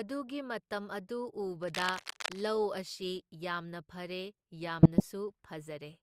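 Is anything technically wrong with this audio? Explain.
Yes, there are two separate problems.

From 1.62 to 2.41 s there's cable scratch noise: a dense, uneven scratching and rustling that sits right over the speech, not far below it, maybe 5 dB down. The likely culprit is a worn cable, connector or control being moved. When that happens, the contact resistance jumps around rapidly, and each jump dumps a burst of noise into the signal for as long as the movement lasts.

Then from 4.79 to 5.04 s you get DAB burbling, short blips of noise and brief jumps in level on top of the speech. That's what weak DAB reception sounds like. Bit errors slip through the error correction into the MP2 audio data, so corrupted samples put short blips of noise into single sub-bands, and corrupted scale factors make sub-bands leap in level for up to a frame. The quarter-second length fits roughly a dozen frames being hit in a row.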